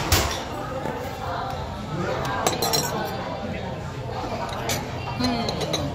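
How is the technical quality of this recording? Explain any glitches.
Compressed frames are skipped three times, at 1.16–1.22 s, 3.53–3.59 s and 5.16–5.21 s. Whole 46.4 ms frames go missing, jumping the audio ahead by roughly 300, 150 and 300 ms.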